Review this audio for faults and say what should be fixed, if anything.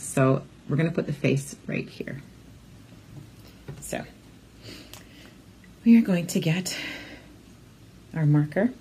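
From 0 to 2.0 s you get an adaptive stream starting at a low bitrate. The opening sounds like a low-rate HE-AAC version: the treble is thin and synthetic, nothing above 12.3 kHz, and the codec artefacts are stronger. At 2.0 s it steps up cleanly, with no gap, to what sounds like a 96 kbit/s AAC-LC version. To prevent it, start on a mid-tier rendition or estimate bandwidth before playback begins.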